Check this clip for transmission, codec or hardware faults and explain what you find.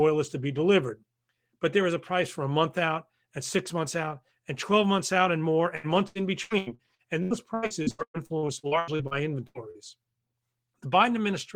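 One transmission fault is audible. From 5.75 s to 9.78 s there is repeated packet loss (robotic sound): about twenty short holes, the longest about 113 ms, each patched by stretching the preceding sound, covering nearly a third of that stretch. Unlike a single dropout or steady codec smearing, the speech turns choppy, with pieces missing, in rapid, recurring bursts.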